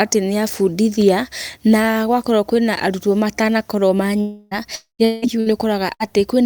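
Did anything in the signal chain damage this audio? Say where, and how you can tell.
Yes, and it's the network stage both times. Three long network dropouts sit close together at 4.21 to 4.54 s, 4.75 to 5.02 s and 5.05 to 5.25 s. In each, the last bit of speech is stretched into a buzz or hiss that fades out, and then the talk picks up further along with a chunk gone: about 300, 240 and 180 ms. In the middle one the fill dies away into roughly 130 ms of plain silence before the audio returns. That pattern most likely comes from the stream stalling and the receiver concealing the hole.

Right after that, two shorter bursts of packet loss land at 5.40 to 5.49 s and 5.94 to 6.03 s, each losing about 60 ms. They sound the same way, only briefer: the receiver holds whatever was playing and turns it down, so it comes out as a short smeared buzz or fading hiss, and the speech jumps ahead when packets start arriving again. 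The duration fits packets in a row going missing or showing up too late to be played.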